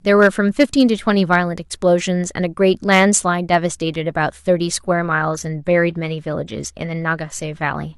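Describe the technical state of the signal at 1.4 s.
Hard clipping sits just before that moment, from 1.33 to 1.37 s. The speech peaks there run about 3 dB past what the signal path can carry, so their tops are sliced off flat. Those squared edges add harmonics high in the spectrum, heard as a brief crackle riding on the loudest part of the sound. Unlike soft saturation or a limiter, the onset is abrupt and gritty rather than a rounded thickening, and it lasts the full 40 ms rather than a single-point click.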